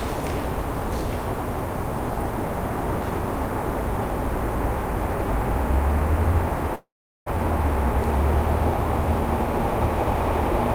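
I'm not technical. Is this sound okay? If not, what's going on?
No. From 6.75 to 7.30 s there is a long network dropout, likely. The sound fades into a buzz, then silence, and 0.4 s is lost.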